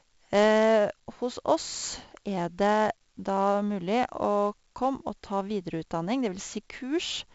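Throughout, the speech was coded with 4-bit ADPCM compression at a rate that fits a 64 kbps stream. Each sample is only a coarse predicted step, so heavy gritty hiss rides every loud syllable, attacks roughen, and nothing remains above 7.7 kHz, dulling everything.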